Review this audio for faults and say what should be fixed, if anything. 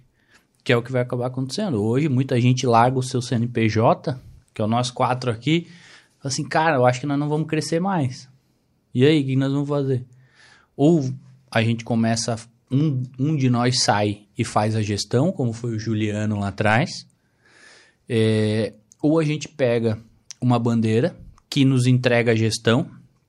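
No faults; nothing needs fixing.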